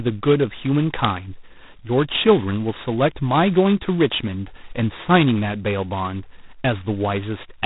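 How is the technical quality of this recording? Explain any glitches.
Poor: the speech is heavily degraded by low-rate ADPCM coding throughout.

G.726 ADPCM, throughout: each sample is sent as a small coded difference from a predicted value, and the very coarse steps, which fit the 16 kbit/s mode, leave a harsh, rasping hiss that rises and falls with the speech, with nothing above 3.9 kHz.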